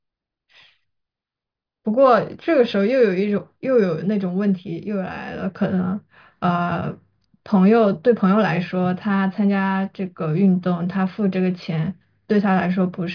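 Nothing in this recording stands out as a technical fault, so there's nothing here to walk through in time order.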